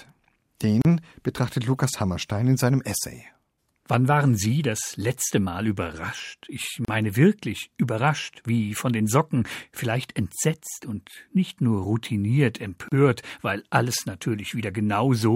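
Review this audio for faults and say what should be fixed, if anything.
The speech has a gap at a join of encoded pieces three times, each about 34 ms long: at 0.82–0.85 s, at 6.85–6.88 s just before "wirklich überrascht wie von", and at 12.88–12.92 s between "und nicht nur routiniert" and "weil alles". Six-second pieces were encoded separately and joined without removing encoder delay and end padding. The strict six-second spacing and the resumption exactly where the sound stopped distinguish this from random network dropouts. Trim encoder delay and padding, or encode the whole recording in one pass.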